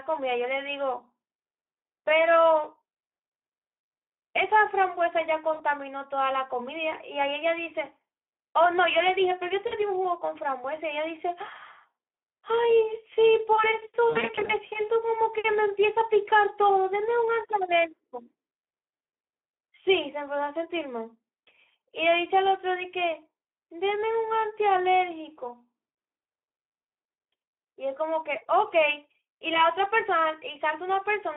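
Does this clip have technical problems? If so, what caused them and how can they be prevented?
Yes. Throughout, the speech carries Speex codec damage, plainly audible: at about 11 kbps the excitation is starved, so the speech sounds hoarse and grainy. It is confined to a 300 Hz to 3.5 kHz telephone band, with no noisy fill above 4 kHz. Using a higher Speex quality setting or a wideband codec would prevent it.

VoIP packet loss concealed by the speech codec occurs at 5.53 to 5.62 s, 9.67 to 9.74 s, 14.09 to 14.54 s and 25.89 to 25.95 s. The gaps run about 60 ms, 40 ms, scattered losses totalling 200 ms over 400 ms, and 60 ms. The decoder stretches the last sound into a buzzy tone or coloured noise that fades and lingers, unlike a clean dropout. Jitter buffering or forward error correction would prevent it.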